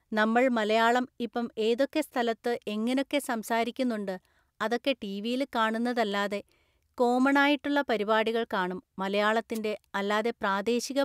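At 9.54 to 9.59 s, a wireless microphone noise hit lasts about 50 ms. The analogue FM radio link fades briefly as reflected signals cancel, and the receiver's noise rises over the speech, heard as a short swish of static.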